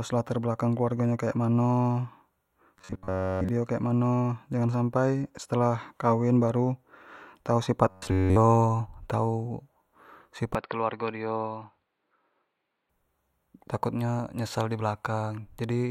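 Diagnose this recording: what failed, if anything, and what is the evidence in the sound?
Robotic sound from repeated short buffers at 2.78–3.49 s and 7.90–8.36 s: a rigid 93.8 Hz buzz, likely a driver or buffer stage looping roughly 10.7 ms blocks; the spectrogram shows evenly spaced harmonic stripes.

Input switched to a poorer device from 10.55 to 12.89 s, likely at the driver stage: no gap, a narrower band, level down about 5 dB, a new noise floor far below.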